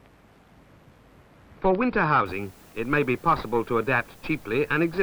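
From 2.26 s to the end, the sound carries low bit depth with dither. Only 8 bits are used, and dither added before rounding turns the rounding error into steady white noise. It is heard as a constant, even hiss, roughly 30 dB below the signal, without distortion.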